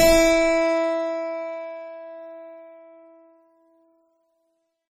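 A music clip with heavy MP3 compression damage throughout. It sounds watery and swirly, and attacks smear, which likely fits a very low bitrate near 32 kbps. Nothing sounds above 19.6 kHz.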